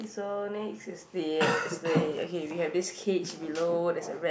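A short speech recording with nothing technically wrong that can be heard.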